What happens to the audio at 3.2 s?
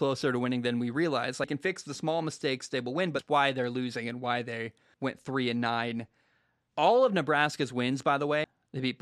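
At 3.19 s the sound jumps abruptly from "mistakes they will win" straight into "why they're losing and", with no gap of silence at the join. This is audio missing between chunks. It is likely caused by a recorder or processor handling the signal in 2-second blocks and dropping a short stretch, roughly 300 ms, while closing one block and opening the next. The two sides are spliced directly, so the flow of speech skips forward.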